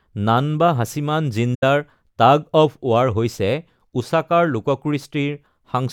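From 1.54 s to 1.63 s the speech drops out in an AAC frame loss with muting. A short run of compressed frames never reached the decoder, which substituted silence for their spectral content. The missing span, about 85 ms, fits a burst of four consecutive AAC frames. Because the decoder's overlapping transform windows taper into and out of the gap, the speech fades down and back up rather than cutting off sharply, leaving a brief, soft-edged hole.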